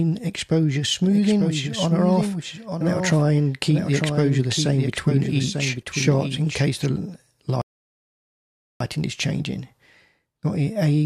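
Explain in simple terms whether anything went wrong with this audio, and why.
From 1.04 to 6.86 seconds everything plays twice, a quieter copy trailing about a second behind. This doubled audio track likely comes from a second, slower capture path.

At 7.62 seconds the sound drops to silence until 8.80, then resumes exactly where it stopped. This rebuffering stall means the player ran out of downloaded audio, adding about 1.2 seconds.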